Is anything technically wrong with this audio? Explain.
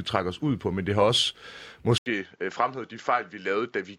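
Yes. Input switched to a poorer device at 1.98 s, through to the end. Capture likely moved to another microphone. After an 80 ms silence, the speech loses everything above 7.6 kHz and turns duller, drops about 5 dB, and gains new background noise roughly 45 dB down.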